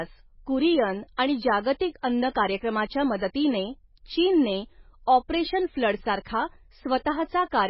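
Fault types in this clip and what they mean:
MP3 compression: The speech sounds heavily coded and watery, with nothing above 5.6 kHz, all the way through. That's likely a low-bitrate MP3, around 16 kbps: short of bits, the encoder drops weak frequency lines frame to frame, and the treble is cut off.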